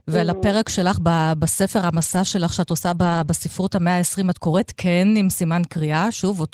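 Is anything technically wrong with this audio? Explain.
Yes. The speech has two stretches of lost packets rebuilt from error correction. The first runs from 1.97 to 2.15 s and the second from 2.85 to 3.27 s. In each, packets went missing. The packet after each one carried a low-bitrate copy of it, and the decoder played that copy. That is why nothing drops out. The copies are coarse, so these spans sound grainier and noisier. About 100 ms and then 220 ms of audio are affected.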